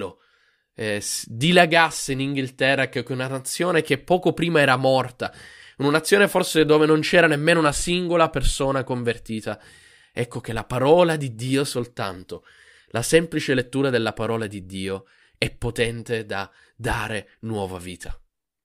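A speech recording, and nothing is technically wrong with it.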